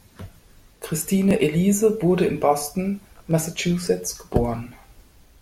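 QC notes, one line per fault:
1.31 s and 3.31 s, overlapping chunks: each new block begins about 6.5 ms before the previous one ended, so that slice of speech plays twice at the seam, giving a brief stutter-click. The joins fall exactly 2.0 s apart, matching 2-second chunk boundaries.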